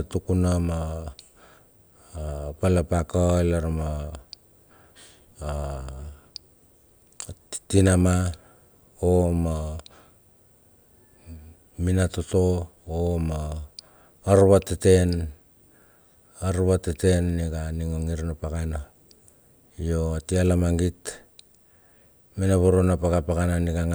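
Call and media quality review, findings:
Call and media quality review findings: none, no faults heard in this speech clip.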